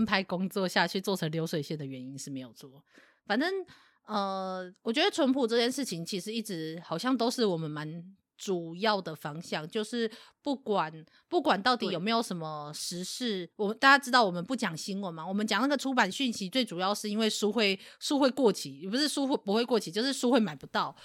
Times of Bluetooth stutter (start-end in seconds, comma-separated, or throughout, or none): none